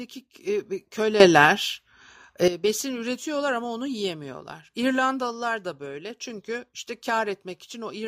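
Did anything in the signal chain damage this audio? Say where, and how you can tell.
Yes. A sudden gain jump runs from 1.2 s to 2.48 s, likely a digital gain setting applied in the driver or processing stage without any ramp. Between those points the level steps up by about 12 dB from one sample to the next, then drops back just as abruptly. The tell is that the background noise rises and falls together with the speech. A louder talker or a closer microphone would lift the voice but not the noise floor.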